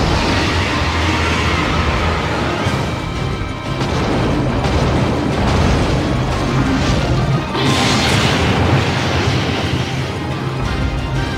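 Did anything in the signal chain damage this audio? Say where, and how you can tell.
No, nothing in the signal chain damaged this audio.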